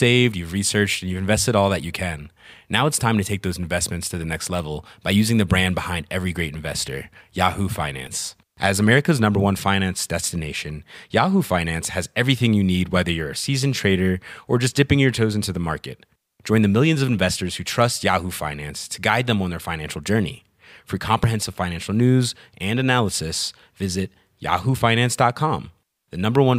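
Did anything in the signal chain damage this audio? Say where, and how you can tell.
Yes, at the driver and buffer stage. Slight forward skips sit at 8.07 s, 17.29 s (between "the millions of" and "who trust") and 21.24 s (before "financial news and analysis"), each losing roughly 10 to 20 ms without silence. This is likely a dropped buffer (overrun): samples were overwritten before being read, and the two sides were joined directly.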